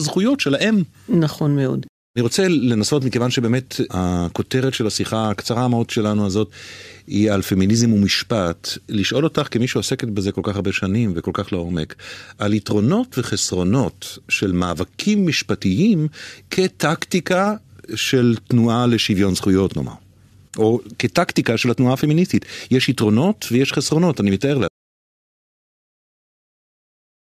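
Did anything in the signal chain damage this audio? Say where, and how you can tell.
Yes. At 24.68 s the speech cuts off mid-flow into an audio dropout to silence that runs to the end of the clip, with silence and no room tone. The likely cause is the input device or link dropping while the recorder kept writing samples.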